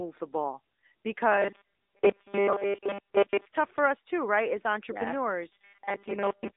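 The whole clip carries the sound of the AMR narrowband mobile codec. The speech sits in a telephone band from about 250 Hz to 3.7 kHz, and nothing passes above 3.8 kHz. Coding damage is plainly audible. The voice turns buzzy and synthetic, as the codec rebuilds the voice from a coarse vocal-tract model and a few pulses. That level of damage fits a mid-rate mode near 10 kbps.

From 1.32 to 3.46 s, just before "tough for us too", the speech becomes a rigid metallic buzz. It has a fixed 200 Hz pitch, which fits a 5 ms slice being played again and again. Most of the real audio in this stretch seems to be replaced by these repeats. The likely cause is robotic sound from repeated short buffers, with new audio arriving too slowly. The same 200 Hz robotic buzz returns from 5.52 s to the end, probably from the same buffer starvation.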